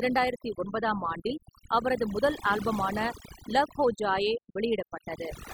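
Across the whole clip, a noise reduction stage has been pushed much too hard on a noisy speech recording, giving overdone noise removal. Any frequency band that sits close to the tool's noise estimate gets pulled far down or switched off, and the quieter parts of the speech are caught along with the noise. Between phrases the background collapses into near silence dotted with twinkling specks.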